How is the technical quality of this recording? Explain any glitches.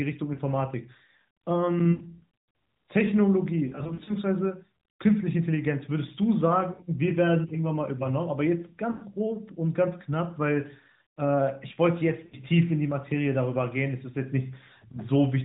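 The recording, narrowband mobile speech with light AMR-NB coding that fits the 12.2 kbps mode, is marred by lost AMR speech frames at 0.34–0.40, 1.92–2.23, 3.68–4.13 (scattered short gaps), 6.74–6.85, 8.92–9.04, 12.26–12.36 and 14.92–14.97 s. Radio errors corrupt frames, and the decoder stretches the last good pitch and vocal-tract shape with falling gain, so the single lost frame at 14.92 s is a brief dip or warble, and the longer runs are a smeared, drawn-out hold that fades rather than a hard click or dead silence, which separates it from a plain dropout.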